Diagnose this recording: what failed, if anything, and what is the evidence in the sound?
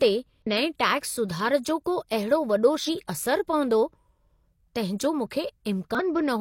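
Short glitches at 0.42–0.47, 2.84–2.89 and 5.95–6.01 s mark damaged data in a compressed stream: corrupt bytes make the decoder misread frames and lose sync.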